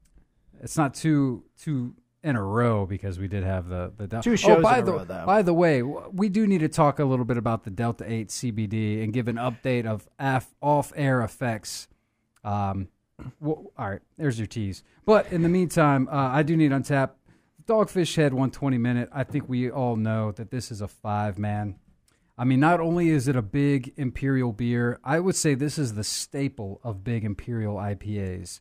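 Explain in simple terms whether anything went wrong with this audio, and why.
Nothing went wrong here, as far as listening can tell: the speech comes across steady and unbroken, with no glitches, dropouts or odd sounds at any point.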